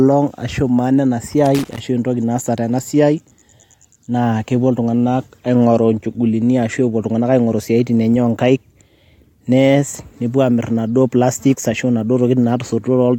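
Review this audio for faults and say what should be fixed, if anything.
Loose connector crackle runs from 1.46 to 1.79 s in this speech: a worn contact making and breaking chops the signal into an irregular scratchy burst. The waveform shows ragged dropouts and spikes, and the spectrogram shows scattered broadband vertical streaks. Reseat or replace the cable and clean the connector contacts before recording.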